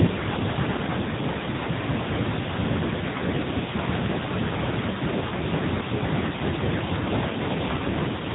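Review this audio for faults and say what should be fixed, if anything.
The whole clip has AMR narrowband mobile codec damage, and it's plainly audible: nothing above 3.8 kHz, and the speech has that buzzy, synthetic edge of a vocal-tract model fed too few pulses, which fits one of the lower modes near 8 kbps. To avoid it, record or route the call over a wideband path instead of a narrowband mobile link.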